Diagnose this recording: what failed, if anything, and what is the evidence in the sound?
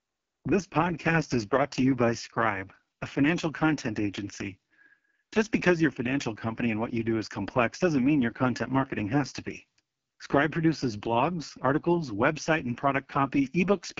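Codec stage: AMR wideband (HD Voice) codec throughout. Speech sounds rough and raspy, with nothing above 7.5 kHz. Such heavy damage fits its lowest 6.6 kbit/s mode.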